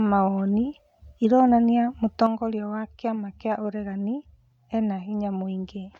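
It's a speech clip, and right after "mawoni ironania", at about 2.26 s, the level drops abruptly by about 6 dB and stays down through the end of the clip. That step is the classic signature of one channel dropping out: likely one side of a stereo feed went dead, so when the two are summed to mono, everything shared between them lands at half strength, and anything carried only on the lost side is simply gone.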